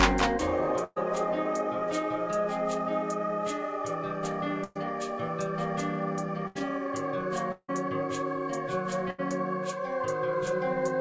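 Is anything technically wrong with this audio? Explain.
Yes. Four bursts of packet loss occur, at 0.84–0.98 s, 4.64–4.77 s, 6.47–6.57 s and 9.10–9.20 s. Each time, about 80–120 ms of audio is lost, and the receiver extends the last sound as a fading buzz or hiss before skipping ahead.

At 7.52–7.70 s, a long network dropout is the likely cause. About 160 ms of audio is missing, bridged by a fading continuation that ends in roughly 50 ms of silence.

Throughout, nothing is present above 8 kHz, which fits a G.722 call path at 64 kbps.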